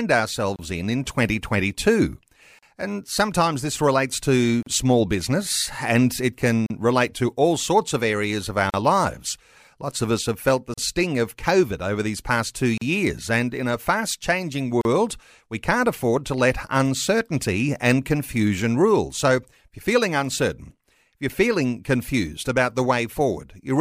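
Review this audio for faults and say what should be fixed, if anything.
Gaps at a join of encoded pieces open in the speech at 0.56, 2.59, 4.63 (after "sometimes this relates to"), 6.66, 8.70, 10.74, 12.78 and 14.81 s. They repeat every 2.0 s and last 28 ms, then 38 ms. Each encoder run's start delay and last-frame padding stayed in. Trim encoder delay and padding before joining.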